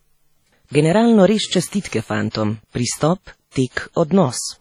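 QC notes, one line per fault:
Throughout, WMA compression, heavy: the speech has a ringing, washy smear with hiss that swells and fades with the signal, as quantisation noise spreads across long transform blocks and weak components drop out. This points to likely low-bitrate WMA encoding, around 32 kbps.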